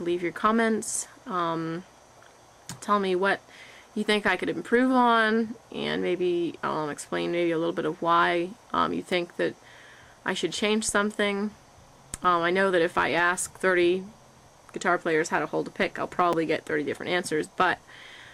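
At 9.12, 12.24 and 16.33 s you get a repeated buffer: new audio arrived late, so the device replayed its last 5 ms chunk once more. With a chunk that short, the hard join sounds like a quick click rather than a stutter.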